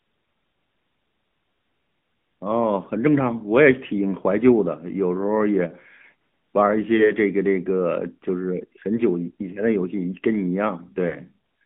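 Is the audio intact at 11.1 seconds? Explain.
No. From 11.08 to 11.15 s there are lost AMR speech frames: one corrupted 20 ms frame made the decoder repeat the previous pitch and vocal-tract settings at reduced gain. You hear a brief dip or warble. On a waveform it shows as a short, smoothed amplitude sag; on a spectrogram, as a smeared, repeated harmonic slice.

Underneath, the AMR narrowband mobile codec confines the band to about 150 Hz to 3.5 kHz and adds a plainly audible buzzy, synthetic quality, consistent with the 10.2 kbps mode. A spectrogram shows empty space above 3.5 kHz.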